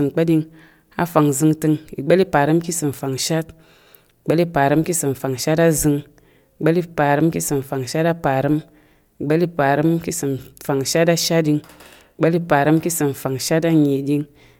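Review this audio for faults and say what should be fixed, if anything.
Nothing stood out on listening to the speech, so there is nothing here that needs fixing.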